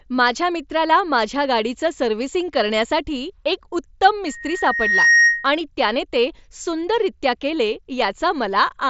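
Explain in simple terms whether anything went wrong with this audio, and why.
Yes. From 4.26 to 5.59 s, a loudspeaker feedback squeal cuts across the speech. A microphone picked up the loudspeaker it was feeding, and the sound went round that loop until one pitch, near 1.9 kHz, took over and became louder than the talking. It is feedback, not a steady whistle or interference, because it starts quietly and swells over roughly the first 0.7 seconds before it stops. The sound is a little dull because it passed through the Bluetooth mSBC headset codec, which cuts everything above about 7.7 kHz.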